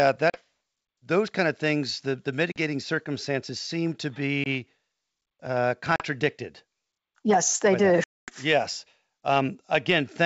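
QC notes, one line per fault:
0.30 to 8.32 s, packet loss on an ADPCM call: Packets dropped and were filled with silence, giving hard-edged holes at 0.30 s (40 ms), 2.52 s after "of things the the" (40 ms), 4.44 s after "circumstances seem to" (20 ms), 5.96 s (40 ms) and 8.04 s after "they do" (240 ms, about ten packets). Each loss leaves the decoder's predictor and step size out of step with the sender's, so the sound returns briefly distorted before the two resynchronise.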